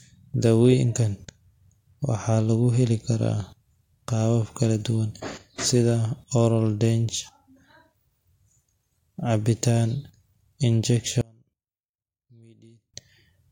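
A speech recording in which one stereo channel likely had its polarity reversed from 11.21 to 12.94 s. Heard summed to mono, the shared centre content cancels, so the voice drops by about 31 dB and collapses to a faint residue.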